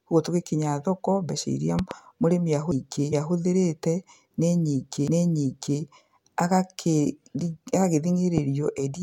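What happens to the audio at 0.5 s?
Nothing goes wrong at 0.5 s: the speech there plays through intact, with no dropout, click, distortion or other fault.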